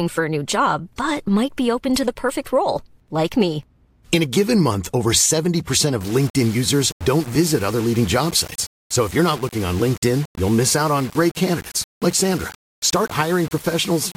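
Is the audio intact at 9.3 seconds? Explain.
No. Low bit depth without dither runs from 6.01 s to the end. Samples are likely rounded to 5 bits, so the speech sounds grainy and quiet parts turn gritty.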